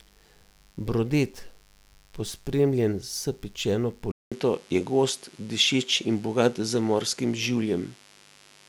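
A speech recording carrying mains buzz throughout: a steady, raspy 50 Hz buzz whose harmonics climb well into the kilohertz range, sitting roughly 35 dB below the speech, the signature of switching spikes from a dimmer, rectifier or unshielded cable leaking into the signal path. At 4.12 s the sound goes silent for 200 ms, then continues to the end duller, with nothing above 11.7 kHz, a level shift of around 5 dB and a new noise floor roughly 40 dB down. The likely cause is the input switched to a poorer device mid-recording.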